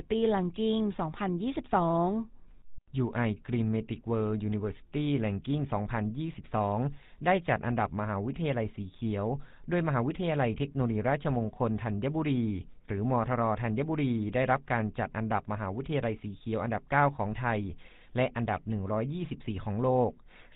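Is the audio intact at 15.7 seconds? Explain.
No, it isn't. At 15.7 seconds the speech is still carrying the GSM full-rate codec damage that runs through the whole clip. Everything above 4 kHz is gone, and because the excitation is rebuilt from sparse, evenly spaced pulses, the voice comes out plainly buzzy and gravelly. The roughness and dullness fit a 13 kbps GSM coding.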